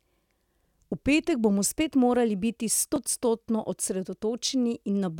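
A short speech recording with two separate problems. From 0.82 to 1.66 s, everything suddenly runs about 5.7 percent slow and drops 102 cents, so roughly a semitone flat, then snaps straight back to normal speed and pitch. That's most likely a drift correction step: clock-matching software nudged the playback rate in one jump to refill its buffer, so speed and pitch moved together until it let go. At 2.96 s there's a tiny blip, only a few milliseconds long, which points to damaged data in a compressed stream. A bad stretch of bytes made the decoder misread the frames there, lose sync, and hunt for the next good frame header, leaving a brief glitch.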